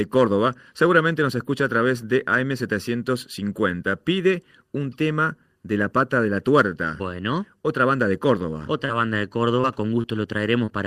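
From start to finish the speech carries channel delay (comb filtering): one channel lags the other by about 0.7 ms, and the mono sum cancels at about 700 Hz and at regular intervals above it. The sound is hollow and phasey. A spectrogram shows fixed horizontal notch bands throughout.

Short concealed packet loss follows at 8.85–8.91 s, 9.61–9.65 s, 10.01–10.05 s and 10.65–10.69 s. Roughly 20–40 ms went missing each time, and the decoder extended the preceding sound to cover it, producing brief smears or wobbles. On a waveform, a voiced fill shows repeated, slightly fading cycles, and on a spectrogram, frozen, blurred harmonics.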